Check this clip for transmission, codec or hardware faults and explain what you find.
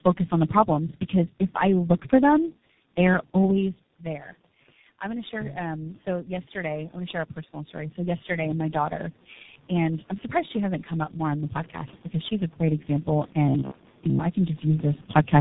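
Two faults are present: tandem speech coding across the whole clip, and an automatic gain rise between 5.0 and 9.08 s.

Tandem speech coding runs from start to finish. The speech sounds rough, muffled and warbly, with nothing above 3.8 kHz. The degradation is heavier than a single codec would produce, which points to about three low-rate speech coders in a row, the last resembling G.723.1 at 6.3 kbit/s. At each border the signal is decoded and re-encoded, so every coder compounds the artefacts of the one before it.

Automatic gain rising occurs from 5.0 to 9.08 s. The input level drops by about 13 dB, and the gain control responds by gradually raising its gain by about 8 dB over those four seconds. This only partly restores the level. Because the gain acts on everything in the input, the voice and the room noise swell together, and the background becomes louder as the correction ramps up.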